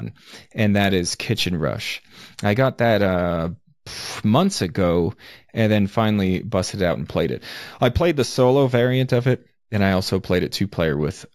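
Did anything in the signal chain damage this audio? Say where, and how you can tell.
Yes. The damage sits at a sample-rate conversion stage and affects the whole speech clip: imaging from linear upsampling, where the audio was raised from 16 kHz to 48 kHz by straight-line interpolation. The top of the original band is dulled, and a mirrored copy of it appears between 8 kHz and 16 kHz, roughly 30 dB below the signal, giving sibilants a faint metallic shimmer. Unlike aliasing, nothing folds downward into the speech band. The added energy sits above the original 8 kHz ceiling as reflected images.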